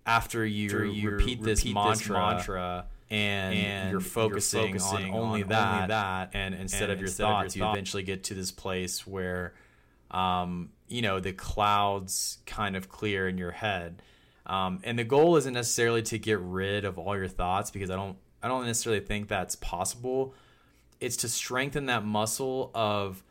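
A second, slower capture path, or an edit holding two copies out of step, has likely mixed the speech in twice. From 0.69 s to 7.75 s, just before "get to this place", a doubled audio track trails the original by around 0.4 s at roughly 5 dB lower. The copy is full-band and dry, with no decay or room colour, and it cuts in and out abruptly at both ends.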